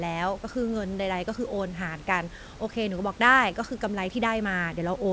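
No technical faults can be heard anywhere in the speech. The call path through the G.722 codec leaves nothing above 8 kHz, and the room noise sits about 24 dB below the speech.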